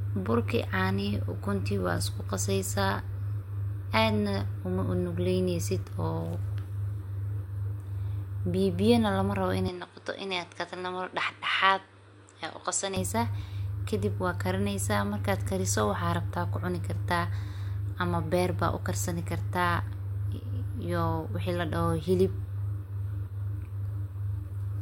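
Between 9.68 and 12.96 s the speech dulls and quietens, cut above 10.5 kHz over faint new noise: likely input switched to a poorer device.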